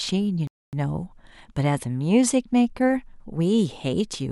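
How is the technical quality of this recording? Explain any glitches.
One glitch stands out: a rebuffering stall from 0.47 to 0.73 s in the speech. The player used up its downloaded audio and had to wait for more data before it could continue. That wait appears as a sudden cut to silence lasting about a quarter of a second, adding 255 ms to the running time. Playback then resumes exactly where it stopped, so nothing is skipped, but the pause interrupts the flow.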